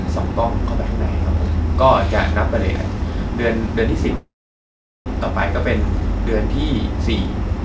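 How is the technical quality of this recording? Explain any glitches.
The recording has one clear glitch, a call audio freeze, and it comes through a call path whose band stops at 8 kHz, consistent with a wideband G.722 codec.

From 4.16 s to 5.08 s the speech halts. A short tail of the last sound continues as a fading buzz, then about 0.77 s of silence follows. This is likely caused by packets held up in transit, leaving the jitter buffer empty. When they arrived, playback resumed where it stopped: nothing is lost, but everything after it runs about 0.9 s late.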